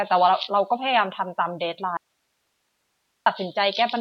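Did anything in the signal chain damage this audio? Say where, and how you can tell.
Yes. From 1.97 s to 3.26 s the speech cuts out abruptly for about 1.3 s, leaving only hiss roughly 50 dB below the speech level: an audio dropout to a faint residue. It is most likely a momentary break in the analogue wiring ahead of the converter, with the input stage still live and passing its own noise. On a waveform the envelope collapses to a thin noise band with hard edges. A spectrogram shows the harmonics vanishing into a flat, faint hiss floor.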